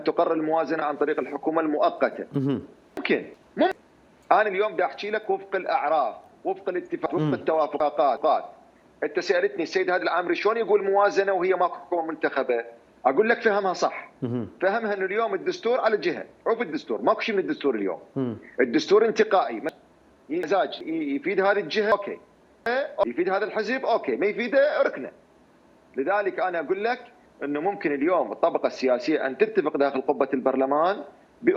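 Chunks out of order occur four times, at 2.97–3.72 s, 7.06–8.17 s, 19.69–20.81 s and 21.92–23.03 s. Audio arrives in blocks of about 0.37 s, and here one block plays late: one block behind in the first case, two behind in the others. Nothing is missing, but the sequence is shuffled. Each event sounds like a brief jumbled stretch, with three hard joins where unrelated blocks meet.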